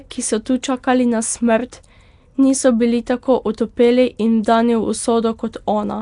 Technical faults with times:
0.00-6.01 Nellymoser compression
1.72 pre-echo

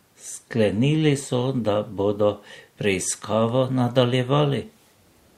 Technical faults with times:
none

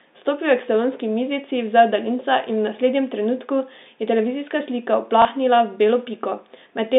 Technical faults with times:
5.22-5.25 packet loss with last packet repeated

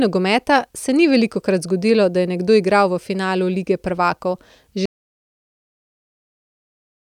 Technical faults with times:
4.86-7.09 audio dropout to silence

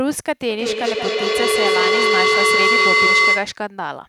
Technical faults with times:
0.51-3.60 feedback howl

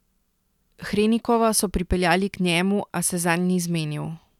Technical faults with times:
none

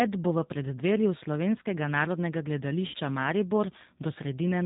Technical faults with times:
0.00-4.65 G.729 codec
2.88-2.96 VoIP packet loss concealed by the speech codec

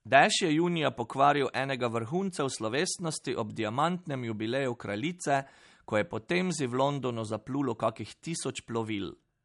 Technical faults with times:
0.00-9.44 MP3 compression

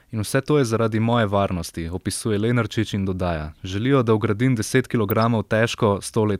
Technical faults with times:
1.65-1.76 DAB burbling
5.10-5.27 DAB burbling

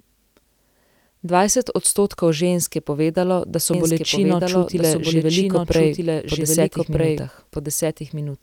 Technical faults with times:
3.74-8.43 doubled audio track

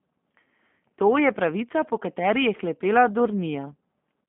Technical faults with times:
0.00-4.28 G.729 codec

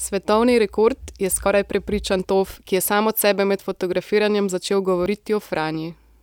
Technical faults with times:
1.46 dropped buffer (overrun)
2.54 dropped buffer (overrun)
5.06 dropped buffer (overrun)

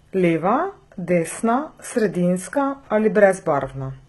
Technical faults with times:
0.00-4.08 HE-AAC compression
1.30-1.33 chunks out of order

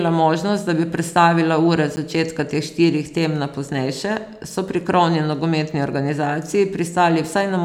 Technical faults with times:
1.96 block of digital silence

